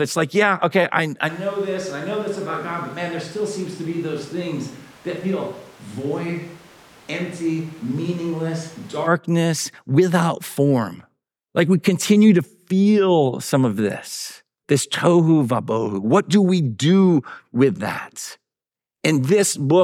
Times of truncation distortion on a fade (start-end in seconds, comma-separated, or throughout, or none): none